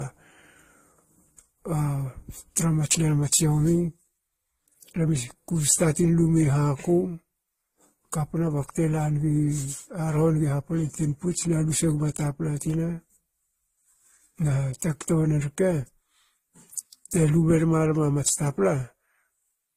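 Throughout, the speech carries layered artefacts from the different codecs and has nothing above 15.7 kHz, likely from transcoding between lossy codecs, each pass adding its own damage.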